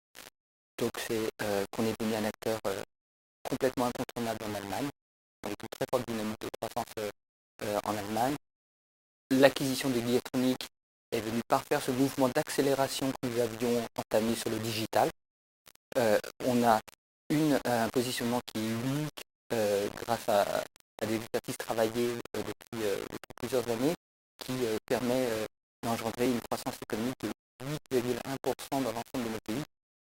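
From the start, the whole clip has a grainy, gritty edge that moves with the sound. It's likely low bit depth without dither, with the audio rounded to something like 6 bits, leaving error only about 15 dB down, so quiet passages fizz and sputter.

At 8.30 s there's a tiny skip where a few milliseconds drop out and the waveform jumps. That's an overlap between stream segments. The player trimmed sound that wasn't really doubled, which fits 6-second segment boundaries.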